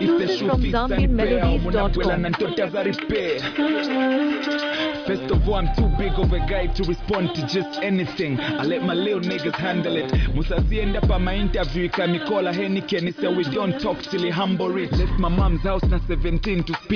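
Nothing in the audio stood out as a technical fault on listening.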